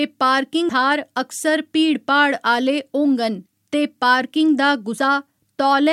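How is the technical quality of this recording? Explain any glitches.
The recording has two glitches of the same kind, compressed frames skipped, at 0.68 s and 4.97 s. At each point the decoder never received a run of compressed frames or threw them out as damaged, so playback jumps straight past them. The speech leaps forward by roughly 150 ms, which fits about seven frames of 21.3 ms.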